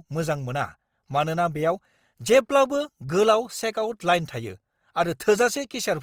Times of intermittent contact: none

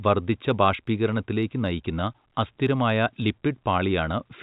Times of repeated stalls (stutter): none

